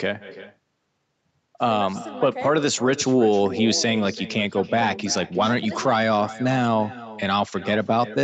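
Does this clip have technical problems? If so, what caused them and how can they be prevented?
Yes. The far end played the call through a loudspeaker, and its microphone picked it up with no echo canceller to remove it. Throughout, the speech returns roughly a third of a second later as a thinner copy about 16 dB quieter. Enabling acoustic echo cancellation at the far end, or having that listener use headphones, would prevent it.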